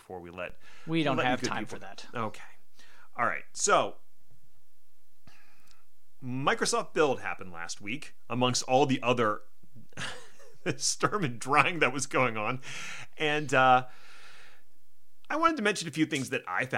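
A DC step appears at 0.50 s, where the waveform's zero line jumps by about -36 dBFS and holds until 15.49 s before returning. Each shift in baseline is heard as a low thump or click, while the speech carries on unchanged.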